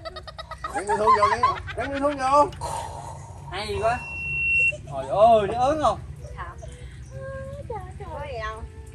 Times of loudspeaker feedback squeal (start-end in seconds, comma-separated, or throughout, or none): 3.73-4.73